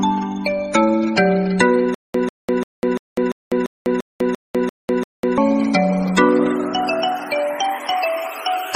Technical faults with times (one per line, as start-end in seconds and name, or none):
1.94-5.38 stutter with silent gaps